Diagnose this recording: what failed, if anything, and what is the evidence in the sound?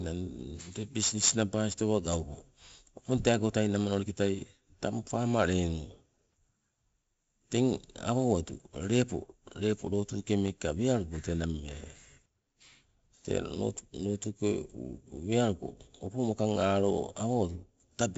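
4-bit ADPCM compression at the codec stage, throughout: heavy gritty hiss follows loud speech, and sharp attacks distort where coarse predicted steps lag. Nothing above 7.7 kHz, which fits a 64 kbps stream.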